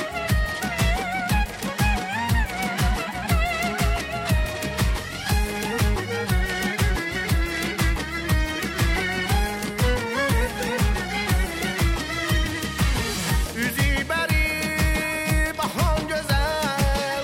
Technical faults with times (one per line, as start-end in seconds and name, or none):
none